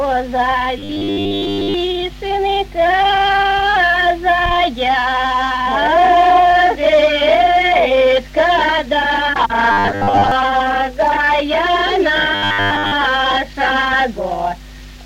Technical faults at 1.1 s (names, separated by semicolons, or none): robotic sound from repeated short buffers